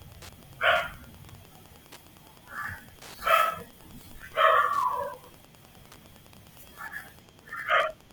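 A speech recording with Wi-Fi interference running the whole way through: a steady ticking roughly ten times a second, well below the speech, from a nearby radio's 102.4 ms beacon being rectified by the audio circuit. A spectrogram shows evenly spaced thin vertical broadband lines; the waveform shows matching small regular spikes.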